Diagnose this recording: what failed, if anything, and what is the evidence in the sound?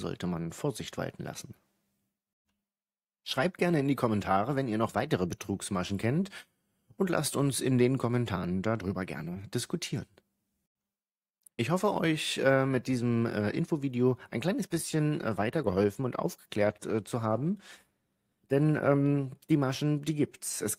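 At the codec stage, a call bitrate drop: the bandwidth estimate fell and the encoder was forced to spend far fewer bits. From 14.81 s to the end, the sound turns coarser and duller, which fits a drop from about 96 kbps to about 24 kbps, bottoming out for roughly 4.3 s.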